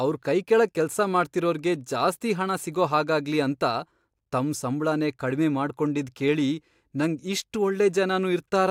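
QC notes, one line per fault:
No faults to note.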